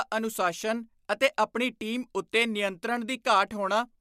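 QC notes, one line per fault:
Nothing stood out on listening to this speech clip.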